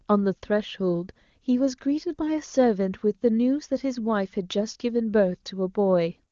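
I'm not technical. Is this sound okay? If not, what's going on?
Yes, this sound is okay.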